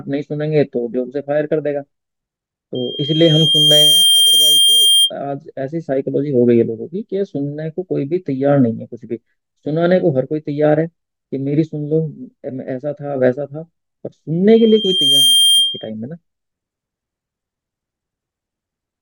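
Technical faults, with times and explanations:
2.75–5.11 s and 14.50–15.90 s, loudspeaker feedback squeal: a single 3.2 kHz tone rises out of the speech, swelling over about a second the first time and a little faster the second, until it sits a few dB above the voice. The microphone is hearing the loudspeaker it drives, and at that one frequency the loop gain passes unity, so the tone grows on itself. That gradual, self-feeding build sets it apart from a steady interfering tone.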